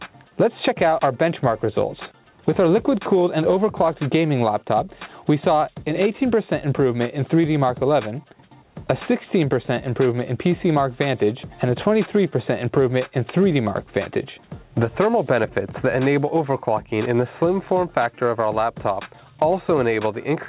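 There are no technical faults to describe at any point; the call path's G.711 A-law coding leaves nothing above 4 kHz, which is simply the band limit of that codec.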